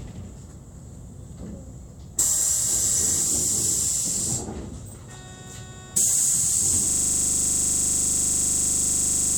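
At 6.89 s the audio locks into a system hang loop that lasts to the end: the host stalled while the hardware kept replaying its ring buffer, repeating one 40 ms segment about sixty times. At 25 Hz it sounds like a steady, rough buzz.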